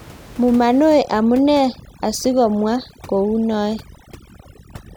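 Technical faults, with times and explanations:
0.99–4.97 s, overdone noise removal: the room noise, about 22 dB below the speech, drops and breaks up into twinkling specks. Noise reduction set too strong is cutting frequency bands near its noise estimate, taking quieter speech detail with them.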